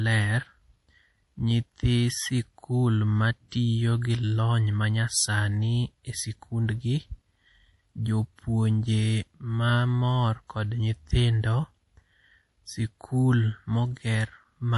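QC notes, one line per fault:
Throughout: MP3 compression, likely cause. Nothing is present above 11.5 kHz, and the weak detail in the speech swirls and turns watery as faint frequency lines drop in and out between frames, with metallic chirping on s sounds and smeared onsets. The damage is plainly audible, which fits a low bitrate around 48 kbps. A simple low-pass filter would only dull the top end without this frame-to-frame swirl.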